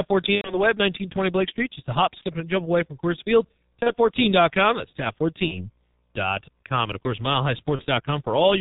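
Throughout, the speech carries heavy G.723.1 codec damage at 6.3 kbit/s: a spectrogram shows nothing above 4 kHz and smeared consonants, and it sounds muffled and hoarse.

VoIP packet loss concealed by the speech codec strikes first at 0.35 to 0.67 s, where three 30 ms frames (90 ms) were lost. The decoder stretches the last sound into a fading buzzy tone or coloured noise that mutes on the third frame, visible as a decaying band, then a brief gap in the waveform. Single lost frames follow at 2.18 to 2.24 s, between "just a hop" and "and jump away from", and at 3.83 to 3.94 s and 5.48 to 5.70 s, each a short smeared, weakened stretch while the decoder recovers.

At 6.92 s, just before "of course", a few milliseconds of sound skip ahead, likely a dropped buffer (overrun), seen as a waveform discontinuity and a thin vertical line on a spectrogram.

One more concealed frame loss falls at 7.76 to 7.86 s, right after "of course".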